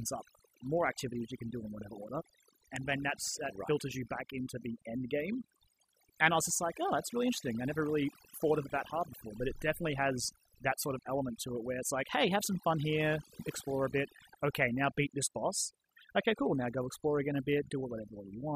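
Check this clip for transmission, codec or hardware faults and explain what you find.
Overdone noise removal runs through the whole speech recording. A noise reducer set far too aggressively has cut individual frequency bands down or out wherever they sat near its noise estimate, taking softer speech detail with them, so pauses fall to near silence dotted with twinkling specks.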